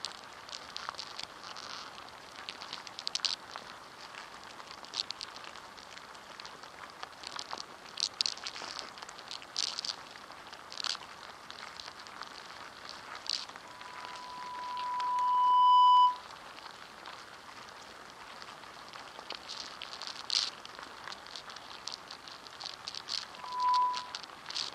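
Loudspeaker feedback squeal occurs twice, from 13.65 to 16.27 s and from 23.35 to 24.25 s, as a single 993 Hz tone that rises far above the sound. A microphone is re-amplifying its own loudspeaker. Unlike a steady added tone, it swells over roughly two seconds, then a fraction of a second.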